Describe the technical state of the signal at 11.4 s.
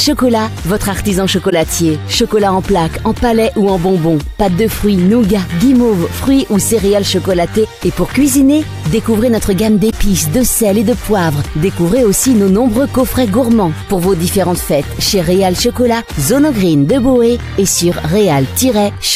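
At 11.4 s the signal is intact, with no dropout, distortion or other fault audible at that moment.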